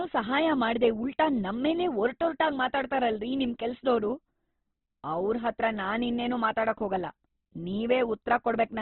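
Opus compression, throughout: nothing remains above 4.1 kHz, and the speech turns grainy and rough, likely because a very low bitrate left bands filled with noise.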